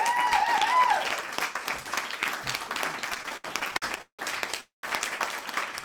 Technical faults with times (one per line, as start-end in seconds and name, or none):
3.09-4.21 repeated stalls (stutter)
4.61-4.85 call audio freeze